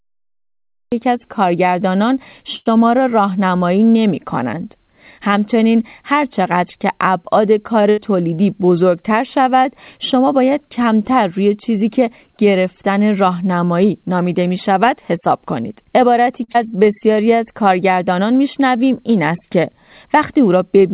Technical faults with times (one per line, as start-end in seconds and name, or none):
0.00-0.92 cut-off start
2.56-2.68 short stall from a late packet
7.82-7.86 short stall from a late packet
7.90-7.99 burst of packet loss
15.72-16.41 jitter buffer speed-up
16.44-16.50 short stall from a late packet
16.52-16.56 skip ahead
16.69-17.38 jitter buffer slow-down